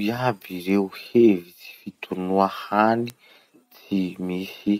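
At 0.70 s a single sample jumps to about -22 dBFS and immediately returns, heard as one sharp tick over the speech. A second, louder bit error spike follows at 3.10 s, again a single sample, reaching about -10 dBFS. Each is a flipped bit in a digital sample value, which throws that sample off by a power of two. The result is a broadband click that bears no relation to the surrounding speech.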